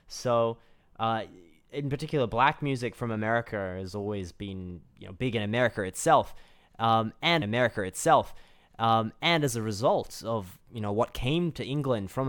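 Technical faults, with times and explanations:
7.41–9.41 s, stream segment repeated: about 2.0 s of speech plays a second time just before "as a result of", with a small blip where playback jumps back, because the player fetched or queued the same segment twice and played it again before moving on.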